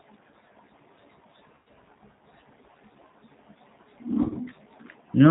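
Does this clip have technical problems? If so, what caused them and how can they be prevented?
Yes. G.729 codec damage runs throughout: the speech is rebuilt from a filter, pitch predictor and sparse pulses, leaving it band-limited below 4 kHz, rough and synthetic, consistent with 8 kbit/s G.729A. Using a wideband codec at a higher bitrate prevents this.

VoIP packet loss concealed by the speech codec occurs at 1.55 to 1.67 s and at 4.23 to 4.38 s. The decoder extrapolates from its last frames into a fading buzzy tone or coloured noise, and the second event is a scattered series of short dropouts of at most 20 ms each. A stable network with QoS prioritisation and a properly sized jitter buffer prevents this.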